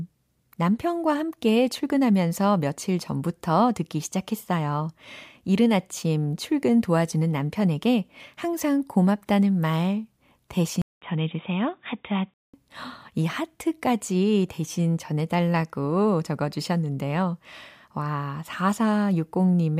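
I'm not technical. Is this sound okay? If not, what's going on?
No. Between about 10.82 and 12.54 seconds, the recording most likely switched its input to a poorer device, such as a different microphone or a headset in call mode. A brief silence of about 0.2 seconds marks the switch. The speech then turns dull and boxy, with nothing above 3.8 kHz, so the crisp, airy detail disappears. A faint new background noise comes in, while the loudness stays about the same.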